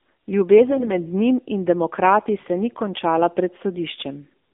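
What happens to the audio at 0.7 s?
From 0.67 to 0.94 s, just before "njim in demokrati se", the speech turns hoarse, scratchy and gargly while roughly holding its pitch and level. These are AMR bit errors: flipped bits in the weakly protected part of each frame, a few percent of them, misplace the excitation pulses and skew pitch, gain and spectral detail. The span fits about a dozen damaged 20 ms frames.

Beneath this, the whole clip carries plainly audible AMR narrowband mobile codec damage. The sound is buzzy and synthetic, confined to roughly 250 Hz to 3.6 kHz, which fits a low mode around 7.4 kbps.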